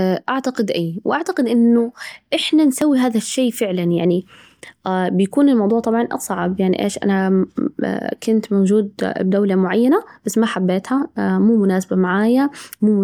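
A speech clip with a single overlap between stream segments at 2.82 s, falling between "وأعتقد إنه إحنا" and "هذا الشي فعلاً يعني". Two adjacent segments, which sit on a 6-second boundary, carried time stamps that overlapped. The player trimmed the overlapping span even though that audio was not actually duplicated, so roughly 15 ms of real signal is lost. The waveform jumps at the join, and this is heard as a brief click or tiny skip in the speech.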